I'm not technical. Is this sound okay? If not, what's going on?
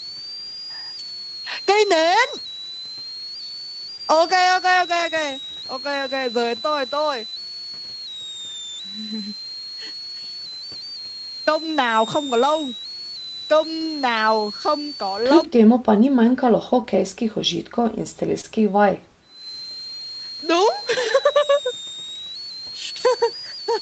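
No. A switching supply whistle runs through the whole recording: a power supply nearby is switching at a rate you can hear. This adds a thin, high whistle around 4 kHz, drifting between about 3.5 and 4.9 kHz.

There is also short concealed packet loss at 3.95, 5.53, 7.30, 16.82, 18.41 and 21.55 seconds. Each time, a few hundredths of a second of the call arrived too late, and the receiving end patched the gap by stretching the last bit of sound. You hear a brief smear or wobble.

From 15.45 to 19.45 seconds, the speech dips sharply and at times nearly disappears. The likely cause is speech suppressed in double talk: both people spoke at once, and the call's echo control, unable to tell the talker from the echo, turned the talker down.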